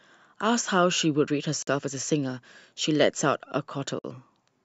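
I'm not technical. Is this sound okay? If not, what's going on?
No. There is a gap at a join of encoded pieces at 1.62 s and again at 3.99 s: the speech was saved in separate pieces and stuck together, leaving silences of about 50 milliseconds before it carries on.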